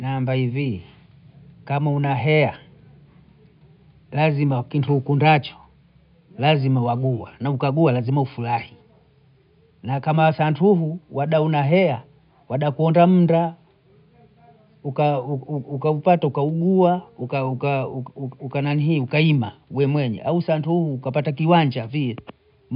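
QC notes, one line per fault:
Nothing stood out on listening to this speech recording, apart from a faint room background that sits about 52 dB below the voice.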